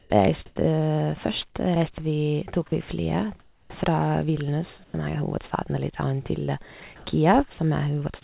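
From 0.00 to 0.12 s, 0.46 to 0.56 s and 3.40 to 3.70 s, the background turns into a steady, featureless hiss. This is comfort noise in place of the background. The sender likely stopped transmitting during pauses, and the receiver filled the gaps with synthetic noise. The level shifts each time, by about -2, +7 and -3 dB.

At 4.84 to 4.94 s, sound is dropped by the voice detector. About 50 ms of real sound gives way to flat noise. The detector likely mistook quiet sound for background. At 6.80 s, a brief 20 ms dropout does the same.

From 6.96 to 7.06 s, comfort noise replaces the background again. It jumps about 10 dB above the real background.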